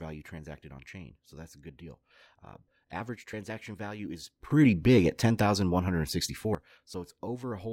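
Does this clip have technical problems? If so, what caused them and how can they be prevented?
Yes. From 4.51 to 6.55 s, a sudden gain jump raises speech and background noise together by about 14 dB, likely an unramped digital gain change. Smoothing gain changes over several milliseconds prevents it.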